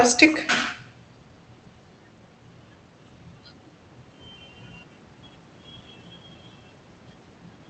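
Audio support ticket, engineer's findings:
Echo with no canceller, full length. Every phrase is followed roughly 150 ms later by a faint, thin copy at about 25 dB below the speech. The far end is likely playing the call on a loudspeaker, with no echo cancellation removing the mic pickup. Spectrogram: a ghost of each syllable, offset right. Waveform: low-level tails after each burst.

Hard clipping, 0.09 to 0.25 s. Peaks overdriven by about 6 dB. They sound like crackle on the peaks. Some stage overloaded and cut the peaks flat. Waveform: flat-topped plateaus. Spectrogram: vertical smears of added harmonics reaching up to the codec's 8 kHz ceiling.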